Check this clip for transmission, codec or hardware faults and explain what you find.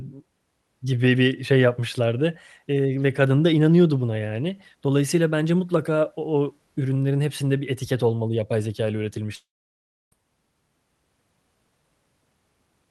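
One transmission fault shows up in this speech clip, carried over a call path whose coding limits the highs to about 12 kHz, consistent with Opus at a modest bitrate.

Long network dropout, 9.35 to 10.13 s: roughly 0.77 s of audio likely never arrived. The receiver stretches the last sound into a brief fading buzz or hiss, then leaves about 0.66 s of near-silence before speech resumes with that stretch missing.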